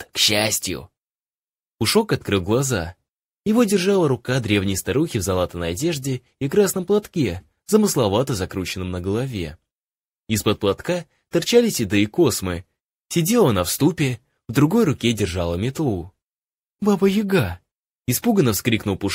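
No technical fault can be heard anywhere in the audio.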